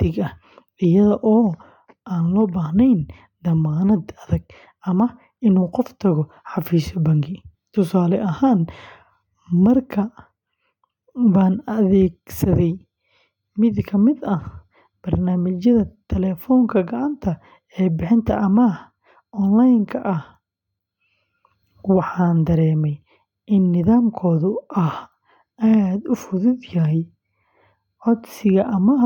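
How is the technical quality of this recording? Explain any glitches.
No glitches turn up anywhere in the speech recording, so there is nothing to explain.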